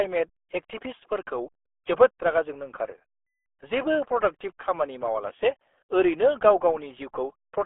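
From start to finish the speech carries the RealAudio 14.4 codec sound, a dial-up era speech coder running at a rate that points to about 8 kbit/s. Content is confined to roughly 300 Hz to 3.5 kHz, with nothing above 3.7 kHz, so the voice is muffled and gargly, with heavy smearing. A spectrogram shows a hard ceiling near 3.7 kHz with empty space above, thin lows under 300 Hz, and blotchy, warbling harmonics.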